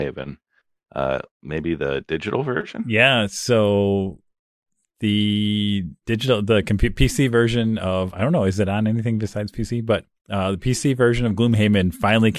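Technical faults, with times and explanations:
No technical faults are present in this speech recording. Nothing in it calls for a time or an explanation.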